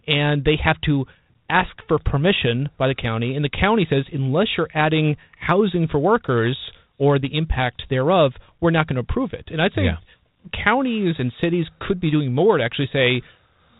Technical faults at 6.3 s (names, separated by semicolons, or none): none